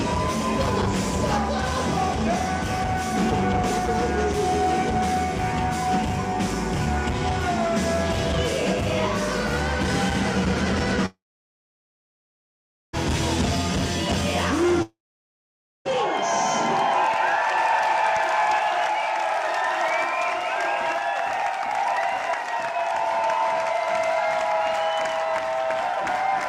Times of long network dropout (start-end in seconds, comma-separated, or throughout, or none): 11.06-12.95, 14.82-15.90